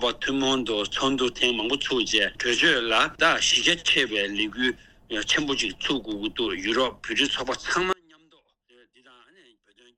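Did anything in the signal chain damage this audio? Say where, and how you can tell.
Yes. At 7.93 s the sound cuts out abruptly and stays gone to the end, leaving only a faint residue roughly 35 dB down. This is an audio dropout to a faint residue. The live path after the break points to a likely intermittent analogue connection.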